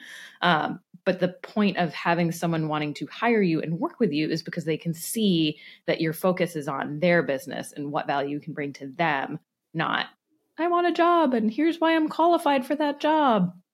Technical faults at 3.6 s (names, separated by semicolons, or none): none